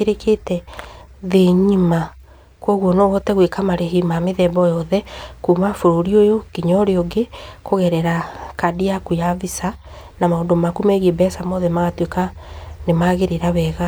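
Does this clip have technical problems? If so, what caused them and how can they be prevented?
No technical faults are audible.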